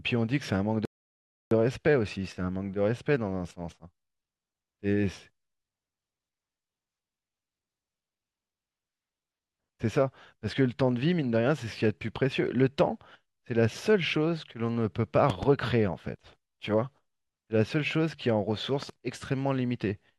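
At 0.85 s the speech cuts to silence and resumes at 1.51 s, exactly where it stopped. This rebuffering stall adds 0.66 s. At 15.30 s a loud pop strikes twice, about 15 dB above the speech. At 18.83 s a quieter double pop follows, about 5 dB above. A voltage spike, likely from a switch or static, causes both.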